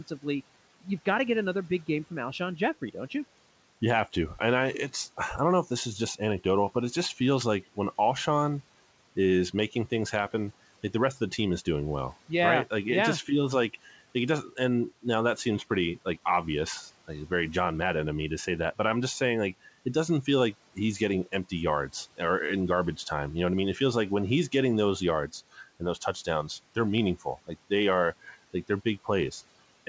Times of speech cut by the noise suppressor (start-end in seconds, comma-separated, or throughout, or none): 27.16-27.71